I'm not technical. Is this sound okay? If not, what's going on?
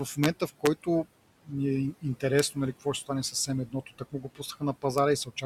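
No. There are three problems.

Throughout the clip you can hear noise suppressor artifacts. A noise filter keeps pushing the background down. It sinks between the words and rises under them.

There are sharp cracks from integer overflow at 0.24 to 0.26 s, 0.66 s, 2.39 s and 4.98 s. A loud moment overran the number range and flipped, which is harsher than ordinary distortion.

Between 3.67 and 4.41 s, there is speech cut by the noise suppressor. The filter mistook parts of the speech for noise, so about a third of a second in total sounds swallowed or faint.

The room noise under the speech is simply part of the recording.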